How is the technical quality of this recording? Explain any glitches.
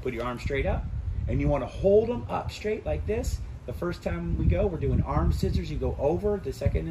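One fault is audible: a drift correction step from 0.92 to 1.84 s. The sound slows by about 5.9% and drops about 105 cents, roughly a semitone, then snaps back to normal speed and pitch. The likely cause is clock-matching software stepping the playback rate to rebalance its buffer.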